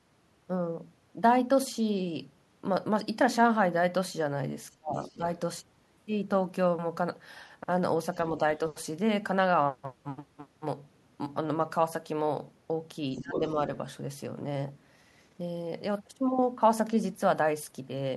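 From 4.77 to 4.96 s the speech is suppressed in double talk, falling by about 35 dB, likely because the echo canceller turned the talker down while the far side was speaking. The waveform pinches nearly flat. From 4.99 to 5.17 s the other side's voice leaks through, likely as loudspeaker echo the canceller failed to remove. It sits about 25 dB below the speech and shows as a faint, separate harmonic trace. Suppression returns at 5.13–5.22 s with a dip of about 15 dB. At 13.15–13.55 s the speech sags by about 15 dB again, with the envelope shrinking. Over almost the same span, 13.17–13.52 s, the leaked voice is much stronger, only about 5 dB under the talker, and it overlaps the speech in the spectrogram.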